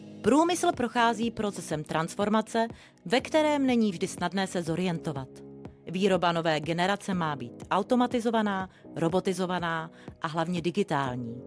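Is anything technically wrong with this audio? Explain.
No, nothing technically wrong is audible anywhere in this audio.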